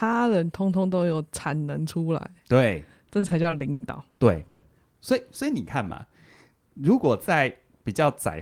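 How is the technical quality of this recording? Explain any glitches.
The recording has two network-related timing glitches in the middle of the speech, one after the other.

From 3.19 to 4.65 s there are repeated stalls (stutter). Audio arrived late or too slowly, so the jitter buffer ran dry eight times. Each time, the receiver stretched the last sound to fill the wait, fading it on the longer gaps, the longest about 140 ms. About 410 ms was filled in, roughly 28% of that stretch, so the speech drags and hiccups. Unlike packet loss, nothing is dropped; the speech simply resumes where it stopped.

From 5.45 to 6.11 s a jitter buffer slow-down follows. To build up a reserve, the receiver repeated single pitch cycles and slivers of pauses to add about 56 ms, playing that passage at roughly 93% speed. The speech sounds slightly drawn out at unchanged pitch. What separates it from the stutter is that it never halts. 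The added time is spread smoothly across the passage instead of arriving as distinct stops.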